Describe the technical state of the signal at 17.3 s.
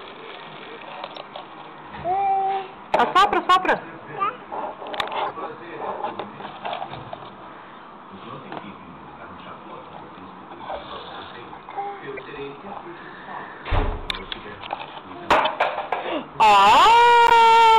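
At 17.27 s a corrupt frame decoded breaks the signal. It lasts until 17.32 s, about 50 ms, which points to roughly two damaged compressed frames. Flipped bits scrambled the coded gains and values in those frames. The decoder still played them, so energy landed at the wrong frequencies. The result is a short, harsh burst, like a chirp or squeak. It is loud, peaking at about -5 dBFS.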